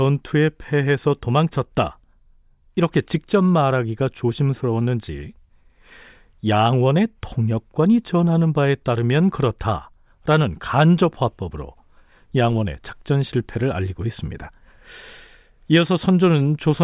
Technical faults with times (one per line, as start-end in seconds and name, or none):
none